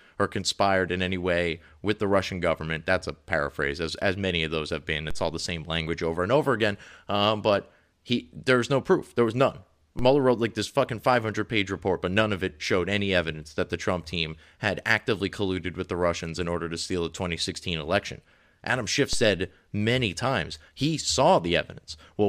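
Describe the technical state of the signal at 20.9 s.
Around 20.9 s the speech signal is intact, with no technical fault present at that moment.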